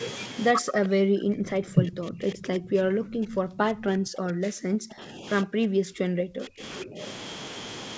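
From 0.52 to 5.26 s, 5.43 to 6.63 s and 6.84 to 7.0 s the speech dips by up to about 40 dB (about 25 dB in the last), likely speech suppressed in double talk: the echo canceller, unable to separate talker from echo, attenuates everything.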